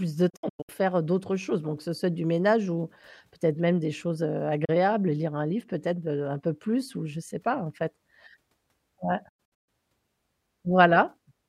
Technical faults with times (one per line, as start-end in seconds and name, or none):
0.29-0.69 digital broadcast dropout
4.65-4.69 digital broadcast dropout
9.29-9.69 digital broadcast dropout